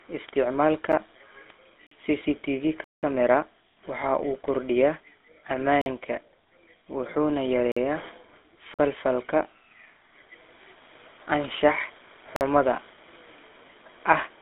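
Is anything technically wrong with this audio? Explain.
Yes. The speech carries three kinds of fault.

Throughout, the GSM full-rate codec leaves a buzzy, gravelly roughness. It reduces the speech to a pulse-driven vocal-tract model, passing nothing above 3.8 kHz. The damage fits a 13 kbps GSM stream.

From 0.29 s to 13.98 s, word clock ticks occur roughly once a second, about ten in all. Two unlocked clocks drift by about 15 parts per million. Each slip drops or repeats one sample, giving a sharp tick.

Blocks of digital silence cut the audio to silence and back with no fade. A 10 ms gap, heard as a tick, falls at 0.92 s. Gaps of about 46 ms start at 1.87, 5.82, 7.72, 8.74 and 12.36 s, which fits 2048-sample buffers arriving late. A 186 ms hole runs from 2.84 to 3.03 s.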